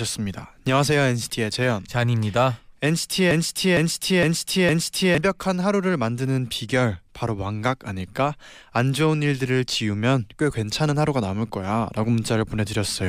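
From 3.31 to 5.18 s the speech falls into a broken-record loop: a 459 ms fragment plays four times, identical and back to back, and the speech due then is lost. Unlike an echo, nothing decays or overlaps. A stalled stream resending its last fragment is the likely cause.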